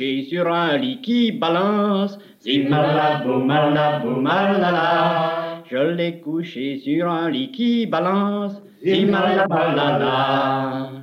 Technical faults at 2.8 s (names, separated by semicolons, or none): gain pumping